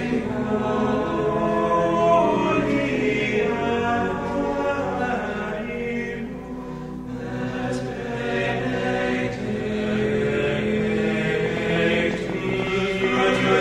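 The clip is a short recording with one clear fault near its end. From 11.46 s to 13.49 s, a train of clicks sits over the sound. The clicks arrive at about 9.4 per second, but the spacing is irregular. There are around twenty of them, all similar in shape. Each one peaks about 10 dB above the surrounding audio, so they stand out as sharp ticking. The likely cause is electrical interference from nearby equipment or a faulty connection or power supply injecting pulses.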